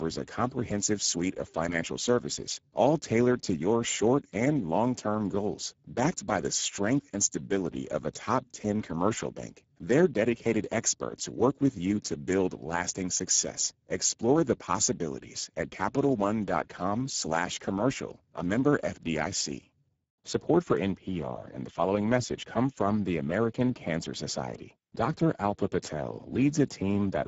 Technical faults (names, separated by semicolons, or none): Speex codec